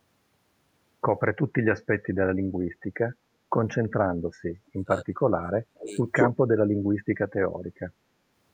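From 4.57 to 5.97 s the speech sinks sharply, falling by something like 35 dB at its deepest and affecting about a second and a half. This is speech suppressed in double talk: with both ends talking at once, the echo canceller likely mistook this talker for loudspeaker echo and turned the line down. At 6.15 to 6.32 s a brief repeat of the speech arrives 217 ms late, about 5 dB louder than the speech itself. That is an echo leak: a far end on loudspeaker likely failed to cancel what its microphone picked up and sent that delayed copy back. The double-talk suppression returns in two short dips, a shallow duck of around 15 dB at 6.8 s and a deeper one of about 20 dB from 7.23 to 7.4 s, each again likely the canceller clamping down while both sides overlap.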